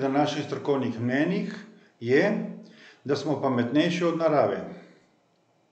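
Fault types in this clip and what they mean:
Listening to the speech closely, nothing stood out as a technical fault.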